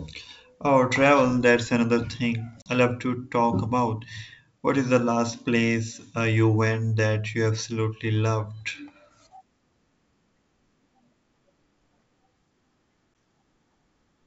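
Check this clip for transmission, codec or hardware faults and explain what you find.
Two dropouts from packet loss on an ADPCM call, carried over G.722 wideband telephone coding at 64 kbit/s. At 2.62 to 2.72 s, between "travel that's another thing" and "love to talk about", about 40 ms of audio, roughly four packets, went missing. A shorter loss of about 10 ms, consistent with a single packet, occurs at 13.14 s. Each gap was filled with silence, which opens a hard-edged hole in the speech. During that hole the receiving decoder's adaptive predictor and step size stopped tracking the sender's, so when audio resumes it comes back slightly distorted before settling.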